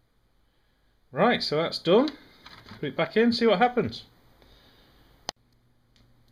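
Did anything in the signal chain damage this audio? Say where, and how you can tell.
Yes. From 0.91 s to 5.66 s a click recurs every 1.58 s, about four times. The steady spacing marks clock drift buffer slips at the buffer between two devices. Their clocks likely differ by several hundred ppm, so each slip drops or repeats a few dozen samples.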